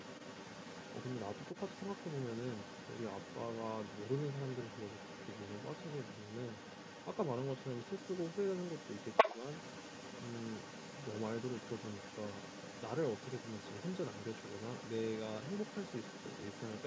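The echo canceller likely left part of the far end's loudspeaker playback in the microphone signal, so the other side's voice leaks through from 0.0 s to the end, running roughly 10 dB below the main speech, a second talker under the primary one in this 8 kHz-wide call audio.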